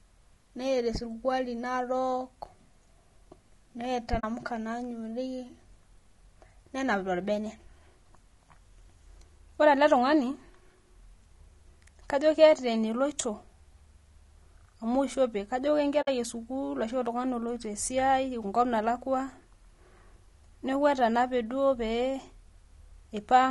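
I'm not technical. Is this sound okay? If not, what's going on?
No, not quite. The whole speech clip has a rough, grainy edge. Voices sound plainly fizzy, as if there's noise tucked between the tones, and the top end feels thin or slightly artificial. That's most likely low-delay AAC compression, the kind video-call apps use. It chops the sound into very short slices to keep the delay down, and at this quality setting it can't hold onto the fine detail of a voice, so it comes out coarse.

There are also two brief dropouts, from 4.19 to 4.24 s and from 16.01 to 16.08 s. Those are AAC frame loss with muting: small chunks of the transmission went missing, and the player filled them with silence instead. Because it fades down and back up, you hear a soft little gap. The second one is a bit longer, at about 70 ms against about 50 ms for the first.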